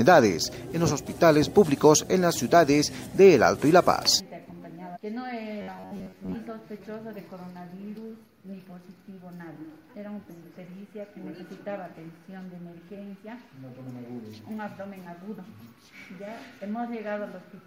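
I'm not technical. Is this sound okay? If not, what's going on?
No, there are two kinds of fault. The first is damaged data in a compressed stream: short blips at 4.18 to 4.20 s, 4.95 to 4.97 s and 10.29 to 10.31 s. Part of the stored or streamed file was corrupted, so the player misread those bits, lost its place and jumped ahead to the next readable chunk. Each blip is only a fiftieth of a second long, a quick glitch rather than a lasting change.

The second is robotic sound from repeated short buffers, from 5.62 to 6.34 s. For most of that stretch the sound turns into a stiff, metallic buzz at a fixed pitch of about 94 Hz. The likely cause is new audio arriving too slowly, so the player kept looping a tiny piece, about 11 ms long, to fill the gap. Unlike the blips, it lasts most of a second and holds one steady buzz.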